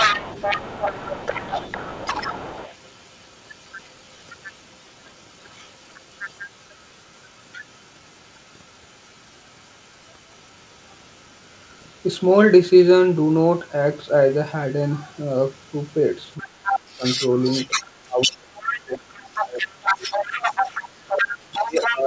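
An echo canceller that likely failed to remove the far end's loudspeaker sound lets the other side's voice leak through from 0.0 to 12.3 s, faint at around 20 dB below the talker, then from 13.12 s to the end, stronger at around 10 dB below.

Once both sides talk at once, the canceller likely cannot tell the talker from the echo and turns everything down. The result is speech suppressed in double talk: dips of around 30 dB from 16.41 to 17.03 s (about half a second affected) and from 18.05 to 20.62 s (about two seconds), then around 20 dB from 21.06 s onward. Throughout, the G.722 call path leaves nothing above 8 kHz.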